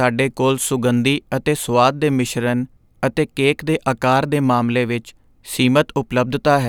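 No technical faults can be heard anywhere in this recording.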